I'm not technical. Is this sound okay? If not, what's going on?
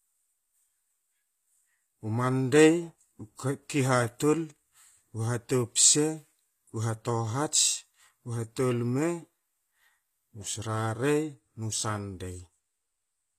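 No. Throughout the clip, the speech has plainly audible damage. The likely cause is HE-AAC compression, a way of squeezing audio into a small file. It keeps the lower sounds and then fakes the top end by copying lower sounds upward. That fake treble is bright but not quite right. So the s sounds come out gritty, metallic or lispy. Nothing at all is left above 14.9 kHz.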